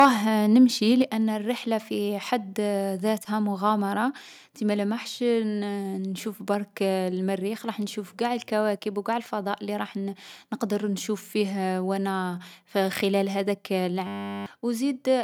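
From 0.00 to 0.06 s the loudest peaks have their tops flattened, giving a crackling, distorted edge. This is likely microphone overload: input level sat about 5 dB beyond the converter's limit, so roughly 7% of samples were clipped.

At 1.02 s, just before "الرحلة في حد", speech and background drop together by about 5 dB in a single step. This is likely a microphone volume step-down, with the call software's automatic gain control trimming the device's input volume.

From 14.07 to 14.46 s, right after "خلال هاذاك", a system hang loop replaces the audio with one 10 ms fragment repeated 39 times. At 100 Hz this sounds like a steady buzz, and about 0.4 s of real audio is lost.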